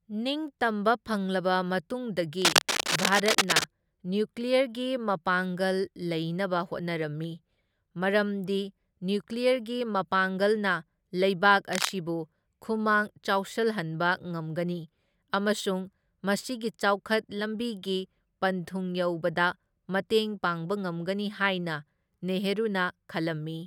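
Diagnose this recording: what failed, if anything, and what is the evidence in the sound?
Cable scratch noise in the analogue wiring. Dense, ragged bursts of scratching sit over the speech from 2.42 to 3.66 s, and again from 11.73 to 11.91 s, just after "ꯃꯄꯥꯡꯒꯜꯅ ꯂꯩꯕꯥꯛ". Both bursts are roughly as loud as the speech itself. The likely cause is a worn cable, connector or control being moved. Its contact resistance jumps around quickly, and that injects uneven noise into the signal until the contact settles.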